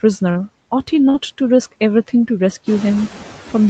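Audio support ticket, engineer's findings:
Noise suppressor artifacts, whole clip. Suppressor cutting bands it judges to be steady noise by about 12 dB, frame by frame. Residual noise drops in the gaps and swells back under speech. Most noticeable after about 2.5 s, where the room noise rises by about 11 dB and the suppressor works harder.

Short concealed packet loss, 0.31–0.37 s and 1.09–1.16 s. Roughly 40 ms of audio per event missed the decoder. The receiver filled each gap, about 40 ms and 44 ms respectively, by extending the preceding sound, then blended back into real audio. Heard as a brief smear or wobble, and a short consonant can drop out.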